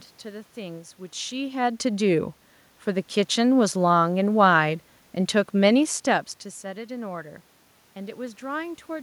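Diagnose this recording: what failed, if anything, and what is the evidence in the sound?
Nothing in the signal chain has failed: the level changes around 1 s and again around 6 s come from the talker moving relative to the microphone, and the background is noise in the room itself, captured as part of the recording rather than added by any stage of the system.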